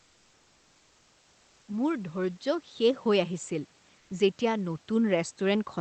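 Automatic gain rising begins at 1.66 s and continues to the end of the clip. The gain control judged the input too quiet and kept pushing its gain up, so the speech and the room noise beneath it swell together rather than the talker getting louder alone. Because the climb is slow and lasts several seconds, it sounds like the whole scene gradually drifting closer, with the background rising along with the voice.

Comfort noise in place of the background appears from 3.99 s to 4.09 s, a gap of about 100 ms. For that short stretch the real room sound, which sits about 39 dB below the loudest speech, gives way to a smooth, featureless hiss about 1 dB quieter, and then the real background returns. The likely cause is discontinuous transmission in the Opus codec: the sender's voice detector stopped sending during the pause, and the receiver filled it with synthetic noise shaped roughly like the room. 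The call path itself has a top end limited to about 8 kHz, which fits Opus running at a fairly low bitrate.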